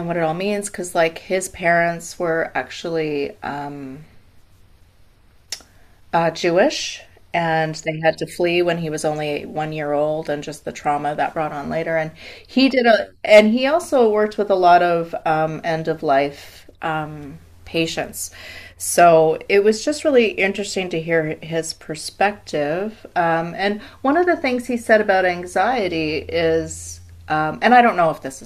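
At 13.33 to 13.40 s, the speech drove a stage about 6 dB beyond the level it could pass, so its peaks were sliced flat in hard clipping. Those squared-off tops throw harmonics high up the spectrum, heard as a brief, harsh crackle.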